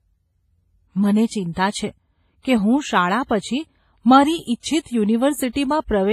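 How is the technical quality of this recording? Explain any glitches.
The recording's technical quality is poor, with heavy codec damage across the whole clip. WMA compression, throughout: the sound rings and washes, with a signal-following hiss and nothing above 15.4 kHz, likely from an early WMA encoder at a low bitrate near 24 kbps.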